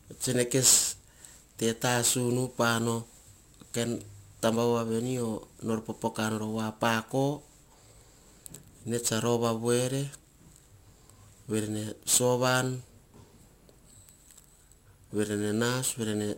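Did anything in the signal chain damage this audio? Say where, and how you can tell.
Yes. The damage is at the sample-rate conversion stage and runs through the whole clip. Crude rate conversion leaves a gritty, inharmonic fizz riding on loud and bright speech, roughly 15 dB below it. Samples were simply dropped without filtering, which fits a 48 kHz to 44.1 kHz change.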